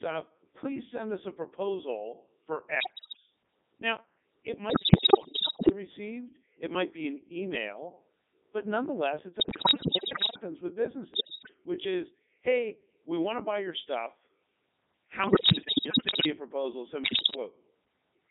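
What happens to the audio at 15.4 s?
From 15.24 to 16.26 s, just before "a proposal send", bit errors on digital voice radio corrupt frames of the Codec 2 vocoder at a high error rate (around one bit in seven). The synthetic voice jumps in pitch, level and tone colour, breaking into bleeps and warbles rather than dropping out to silence. Throughout the clip, the 3.2 kbit/s Codec 2 vocoder rebuilds the speech from sine waves, giving a steady robotic buzz confined to roughly 200 Hz to 3.7 kHz.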